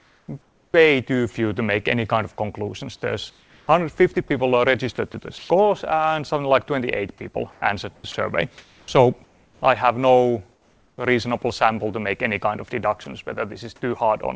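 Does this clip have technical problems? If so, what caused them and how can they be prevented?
Yes. The sender likely used discontinuous transmission, stopping audio in pauses so the receiver filled them with synthetic comfort noise. At 0.0 to 0.74 s, 3.30 to 4.16 s, 7.52 to 9.62 s and 10.52 to 10.98 s, the real background gives way to steady, featureless hiss, about 3 dB quieter in the last stretch. Turning off DTX keeps the real background.

Sound dropped by the voice detector happens at 4.14 s, 8.12 s and 13.04 s. Each time, the detector likely took a brief bit of sound for background and stopped sending for about 20 ms, so a tiny slice of sound gives way to noise. Lowering the detector's threshold, or adding hangover time, keeps such edges intact.

Sound chopped by the voice detector runs from 4.96 to 5.50 s. The detector likely switched on and off more than once there, and parts of the sound were swapped for comfort noise, about 160 ms in all. 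The result is choppy. A longer hangover and less aggressive detection stop this toggling.

Nothing above 8 kHz survives the call path, which points to a wideband G.722 codec.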